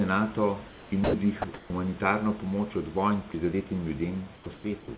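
From 0.68 to 1.14 s, the room background gives way to steady, featureless comfort noise. Likely discontinuous transmission: the sender stopped and the receiver filled the gap. It happens again from 1.42 to 1.7 s, and from 4.34 to 4.88 s after "pomoč od vojn prizadetim".

Sound dropped by the voice detector appears from 1.04 to 1.14 s, about 90 ms lost. Shorter drops occur at 1.42 to 1.44 s and 3.32 to 3.34 s, after "pomoč od vojn". Quiet sound was likely judged as background and replaced with noise.

At 4.44 to 4.46 s, an onset clipped by the voice detector cuts 20 ms. The sound starts abruptly, without its soft beginning. The detector was likely slow to react.

Across the clip, nothing is heard above 4 kHz, which fits a narrowband call codec. Room noise sits about 23 dB below the speech.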